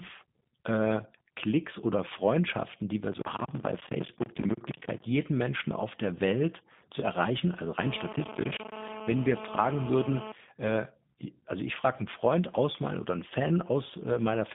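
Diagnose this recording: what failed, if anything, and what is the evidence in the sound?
The codec stage failed: G.729 coding spans the whole speech clip. A spectrogram shows a 150 Hz to 3.6 kHz band, empty above 3.7 kHz. Speech rebuilt from a vocal tract filter, pitch predictor and sparse pulses sounds plainly rough and synthetic, which fits 8 kbit/s G.729A.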